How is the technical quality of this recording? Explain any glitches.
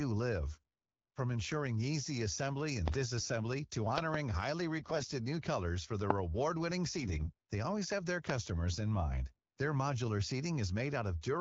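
The recording has two kinds of glitch on top of a wideband phone-style sound whose clarity points to AMR-WB at around 12.65 kbit/s.

AMR bit errors at 0.54–0.58, 3.18–3.28, 4.78–5.12 and 7.00–7.32 s: flipped low-priority bits misplace excitation pulses and skew pitch and gain, so speech turns briefly hoarse and gargly.

Loud pops at 2.88–2.96 (two), 6.10–6.13 and 8.30–8.32 s: sharp clicks well above the speech, likely from a voltage spike such as a switch or static discharge.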